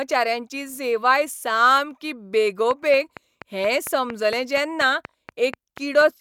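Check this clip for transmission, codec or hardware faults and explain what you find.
One fault is present, a train of clicks. From 2.71 s to 6.02 s, sharp clicks of much the same shape tick at a regular 4.24 per second, around fifteen in all. They peak about 10 dB above the speech and carry through the pauses. The likely cause is interference from nearby equipment, or a faulty connection or power supply injecting repeated pulses.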